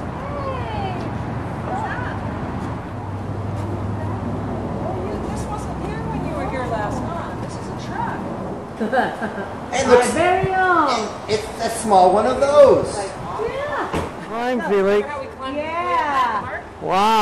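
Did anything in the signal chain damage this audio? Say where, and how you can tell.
Yes, at the codec stage: compressed frames were skipped, with whole frames dropped from the file or rejected by the decoder. At 2.00 s the audio jumps forward by roughly a tenth of a second, about four frames of the roughly 23 ms frame length the jump points to.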